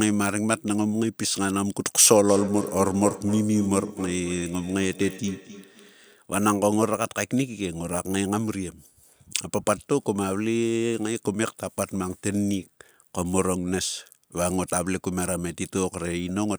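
Feedback echo between two devices runs from 2.28 to 6.22 s. The speech is picked up by a second device in the same room, sent back into the call, and heard again. The echo canceller misses it because that device never played the sound. The speech returns roughly every third of a second, peaking at about 11 dB below the speech.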